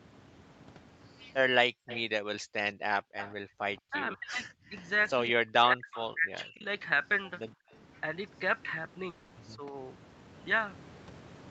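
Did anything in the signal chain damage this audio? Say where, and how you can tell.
Yes. The damage is in the call processing and the network, at four kinds of fault.

Background gated by the echo canceller shows up three times. From 1.72 to 3.55 s the room sound dips hard, by about 38 dB at the deepest point, for well over half a second in total. Shorter dips follow at 4.62 to 4.70 s (about 19 dB) and 7.55 to 7.71 s (about 27 dB). The echo canceller clamped the microphone while the loudspeaker played, then released it.

An echo leak is heard from 1.87 to 3.34 s and again from 5.95 to 6.33 s. A delayed copy of the speech trails the original by 176 ms. It sits roughly 15 dB below the main speech. The fixed delay and the repeat in both spans point to a loudspeaker echo path. The likely cause is an echo canceller on the side playing the call on a loudspeaker that did not fully cancel what its microphone picked up.

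Speech suppressed in double talk appears from 3.83 to 6.66 s. The talker's speech drops in pieces, by roughly 40 dB at worst, for about a second in total. A milder dip of around 10 dB comes at 9.56 to 9.74 s. These losses line up with the other side talking. The likely cause is the canceller failing to separate the talker from the echo and turning both down.

A long network dropout hits from 9.09 to 9.33 s. About 220 ms of audio never arrived. The gap is filled rather than silent. The last sound is stretched into a fading buzz or hiss. Then the audio resumes further on, with that stretch missing. The likely cause is lost packets that the receiver's concealment covered over.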